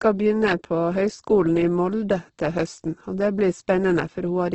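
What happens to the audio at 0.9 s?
At 0.9 s the speech has the grainy, rough texture that runs through the whole clip, with nothing above about 8.2 kHz. It's likely Opus compression at a very low bitrate, maybe around 12 kbps, with bands refilled by folding or noise.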